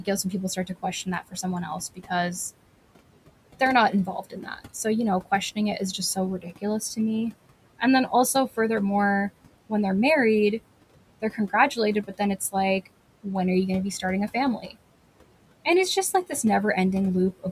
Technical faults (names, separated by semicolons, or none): noise suppressor artifacts; speech cut by the noise suppressor